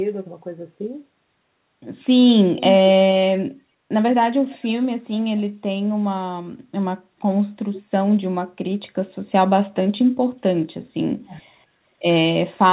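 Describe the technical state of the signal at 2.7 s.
Right at 2.7 s you're inside a short burst of echo leak, running from about 2.57 to 2.89 s. A faint second copy of the speech trails the original by roughly 417 ms, sitting around 10 dB below it. Most likely the far end is on a loudspeaker and its echo canceller let part of the mic pickup slip back down the line. The echo shares the call's 4 kHz band limit.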